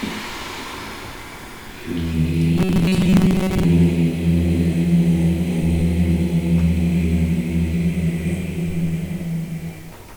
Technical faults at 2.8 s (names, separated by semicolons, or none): robotic sound from repeated short buffers